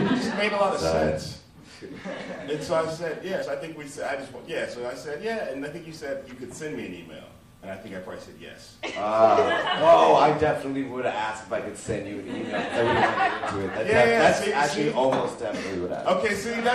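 From start to finish the audio sounds watery and swirly, with metallic chirps on bright detail and smeared attacks. This is likely MP3 compression at a low bitrate, around 64 kbps. Unlike a simple low-pass filter, the faint detail flickers on and off from frame to frame.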